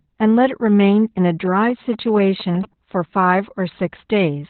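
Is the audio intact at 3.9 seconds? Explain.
No. At 3.9 seconds, as throughout the clip, the speech carries Opus voice compression damage. Nothing is left above about 4.3 kHz, so the voice sounds muffled and telephone-like. Coarse linear-prediction coding makes it hoarse and slightly robotic. This points to narrowband SILK at about 8 kbps.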